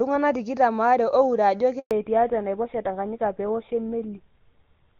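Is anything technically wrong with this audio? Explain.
Yes, there are two problems, and they're linked.

First, a handover gap at about 1.79 s, lasting 120 ms until 1.91 s. The call got passed from one network to another, and no speech frames came through during the switch. The speech cuts out almost immediately and stays silent until the new link picks up, so whatever was said in that stretch is simply gone.

Second, fallback to narrowband from 1.91 s to the end. Before the gap, the speech has the fuller top end of HD Voice, with faint or no codec damage, which fits AMR-WB at around 23.85 kbit/s. After the handover the call lands on an older narrowband codec, most likely GSM full rate at 13 kbit/s. Nothing above 4 kHz survives, so the speech suddenly sounds duller and rougher.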